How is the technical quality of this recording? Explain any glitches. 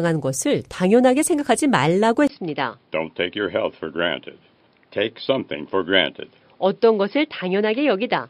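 The speech degrades partway through. At 2.27 s a 20 ms silence is followed by sound that stops at 5.3 kHz, drops about 5 dB and gains new background noise roughly 40 dB down. The input likely switched to a poorer device, turning the speech dull and boxy to the end. The brief gap and the changed background noise show it is a device change rather than a simple filter.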